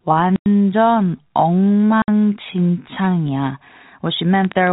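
A time-stretched section runs from 0.0 to 3.3 s, slowed to about 0.7 times normal speed, likely by software lengthening the speech while holding its pitch, which makes it drag. Packet loss filled with silence cuts a 100 ms hole at 0.36 to 0.46 s and a 60 ms hole at 2.02 to 2.08 s. These fit five and three lost 20 ms packets, replaced by silence with hard edges. A train of clicks follows from 4.45 s to the end at 4.72 s, about 12.8 per second at an uneven pace, peaking a little above the speech level. It is likely interference or a faulty connection, heard as irregular ticking. Throughout, the narrow telephone band of G.711 coding stops everything above 4 kHz.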